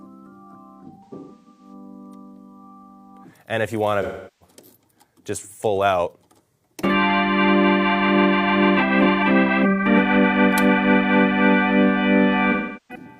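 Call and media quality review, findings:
AAC frame loss with concealment at 0.82–1.73 s, 4.02–4.54 s and 12.51–13.05 s. Smeared, noisy or phasey patches. The decoder rebuilds lost frames from the last good spectrum. First event is scattered, with runs up to roughly 150 ms. The other two lose 384 ms each.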